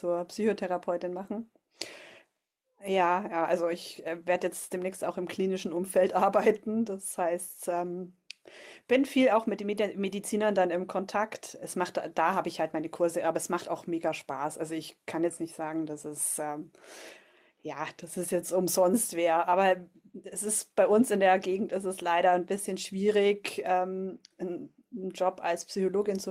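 No technical faults are audible.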